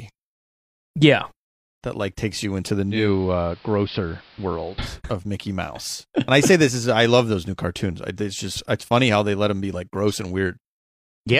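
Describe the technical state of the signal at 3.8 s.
At 3.8 s the signal is in a digital radio blend to analogue, running from 2.82 s to 5.02 s, just after "takes you into the". The receiver lost the digital stream and cross-faded over about 309 ms to the station's AM broadcast, so the level dips by about 1 dB, and hiss sits roughly 25 dB below the speech. The gradual cross-fade and rising noise floor distinguish it from a plain codec bandwidth drop.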